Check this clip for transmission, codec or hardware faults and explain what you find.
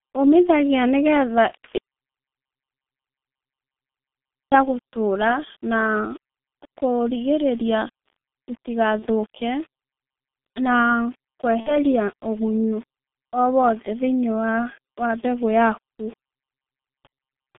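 Three kinds of fault are present: low-rate codec coding throughout, one long silent gap, and two brief concealed packet losses.

The whole clip has passed through the G.723.1 codec, with heavy damage. The coarse, slowly updated voice model and a band of roughly 150 Hz to 3.6 kHz, consistent with about 6.3 kbit/s, leave the speech muffled and hoarse, with smeared consonants.

From 1.78 s to 4.52 s there is an audio dropout to silence. The input was likely lost, so about 2.7 s of silence, with no room tone, precedes "gũtũra na".

VoIP packet loss concealed by the speech codec occurs at 8.99 to 9.07 s, losing about 30 ms, and at 11.60 to 11.78 s, losing about 60 ms, which fits one and then two missing frames. In both places the decoder extrapolates the last pitch and filter, producing a fading buzzy tone or coloured noise followed by weakened speech.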